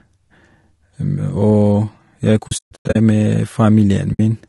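Low-delay AAC compression runs through the whole clip. The speech sounds rough and grainy, with noise filling the gaps between pitch harmonics and a thin, synthetic-sounding top band. The likely cause is AAC-ELD, whose short frames resolve harmonics poorly, and the damage fits a bitrate near 32 kbps.

AAC frame loss with muting first appears from 2.47 to 2.96 s. Lost frames were decoded as silence, so the audio fades out and back in through a cluster of soft-edged dropouts. Together they remove about 340 ms of sound across 480 ms, with the longest gap around 150 ms. A shorter muted hole follows from 4.13 to 4.20 s, lasting 60 ms.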